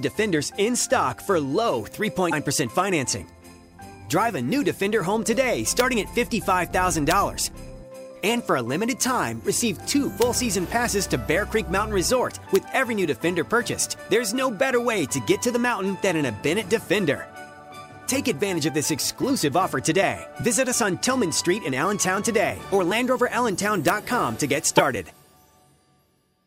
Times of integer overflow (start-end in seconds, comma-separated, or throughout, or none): 5.80, 7.11, 10.22, 12.56, 23.88